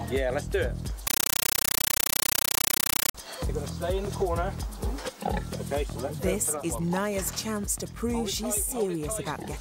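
From 1.07 to 3.15 s the sound is replaced by harsh, very loud chattering static, a rapid buzz of noise bursts about 9.3 ms long repeating 31.25 times a second with silence between them. This is a compressed stream played as audio: encoded data from a digital link was treated as ordinary samples instead of being decoded. Each coded frame plays as a burst of noise followed by zero padding, and that frame rhythm points to an AC-3 (Dolby Digital) stream.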